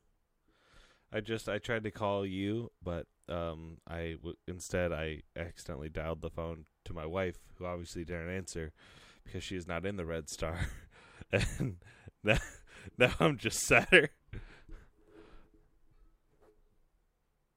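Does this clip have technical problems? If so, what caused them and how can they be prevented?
No, there's nothing technically wrong to hear in this speech recording, so there's nothing to fix or guard against here.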